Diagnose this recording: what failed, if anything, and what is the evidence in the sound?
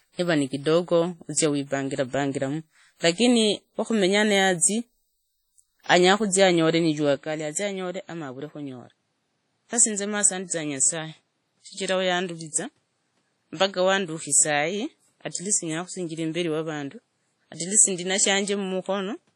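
The codec stage failed throughout: the speech was likely squeezed through WMA compression, and the damage is heavy. Long transform blocks smear quantisation noise over tens of milliseconds, so consonants ring and vowels sound washy, with a hiss that rises and falls with the speech. Weak spectral lines drop out entirely, and nothing survives above 17.3 kHz. That fits a low bitrate of around 32 kbps.

At the capture stage, the input likely switched to a poorer device at 7.16 s. This could be a different microphone or a headset's call profile. The change happens with no gap, and the new path holds for the rest of the clip. The band now stops at 13 kHz, so the sound turns duller. The level drops by about 5 dB, and a new background noise floor appears, roughly 45 dB below the speech.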